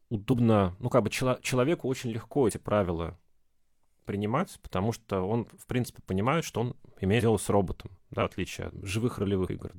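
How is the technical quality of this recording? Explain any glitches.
The speech has five short dropouts where compressed frames were skipped, at 0.28, 2.42, 7.16, 8.13 and 9.43 s. At each point whole frames of the encoded stream were either missing or rejected by the decoder as damaged, so playback jumps ahead. The gaps are roughly 150 ms, 50 ms, 100 ms, 100 ms and 100 ms. At each join a fragment of speech simply vanishes.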